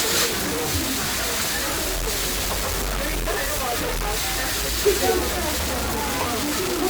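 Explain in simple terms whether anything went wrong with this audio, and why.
Something did go wrong, and it lasts the whole clip, from start to finish. The everyday sounds come through coarse and grainy, and the grit moves along with whatever is happening. That's low bit depth without dither: the audio was most likely chopped down to only about three bits and simply cut off, with no noise added to smooth it. The error is nearly as loud as the sound itself, and the quietest bits crackle or drop out.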